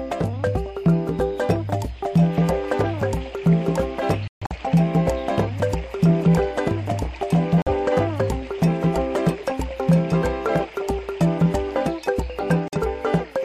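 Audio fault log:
4.28–4.57 s, 7.62–7.68 s and 12.68–12.79 s: corrupt frame muted. The audio drops to silence three times, abruptly, for about 0.29 s, 0.06 s and 0.11 s. Damaged compressed frames were rejected by the decoder, and the player filled their slots with silence. The longest gap points to a run of several lost frames. Timing stays intact, so the sound resumes on schedule after each hole.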